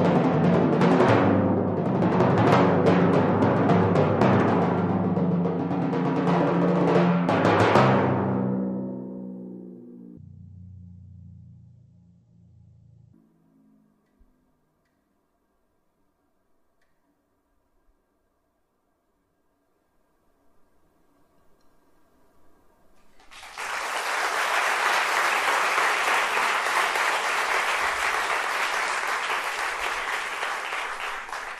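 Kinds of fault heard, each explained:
Section at the wrong speed: from 10.17 to 13.13 s the audio suddenly drops to about half speed (0.516x), so everything stretches out and sinks, roughly ten semitones lower, close to an octave, before snapping back at normal rate. Because pitch and tempo shift together and the change is abrupt, this was likely a stretch played back against the wrong clock, as when an editor or player misreads the rate for just that segment.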